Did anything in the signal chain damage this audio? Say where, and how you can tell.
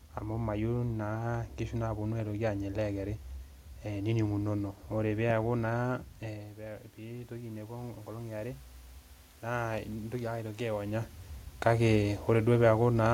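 Yes. Automatic gain rising, from 6.22 s to 8.66 s, in the call-processing stage. Just before it, the talker moves away from the microphone and the level at the input falls by about 12 dB. The automatic gain control reads this as a quiet input and raises its gain by about 5 dB over roughly two and a half seconds. The room noise swells along with the voice, which shows it is processing gain rather than the talker coming closer.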